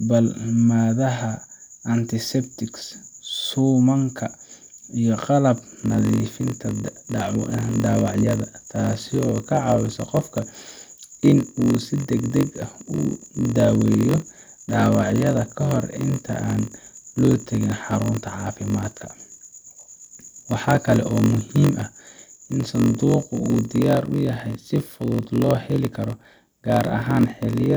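Speech, and from 5.56 s to the end it carries a block size mismatch (padded): each 1024-sample block read downstream is only partly filled, with zeros completing it, so a steady 46.9 Hz buzz sits under the sound and everything plays at 0.938 times normal speed. Unlike a sample-rate mismatch, pitch stays essentially unchanged despite the slowdown, and unlike buffer underruns, the gaps recur with perfect regularity rather than scattering.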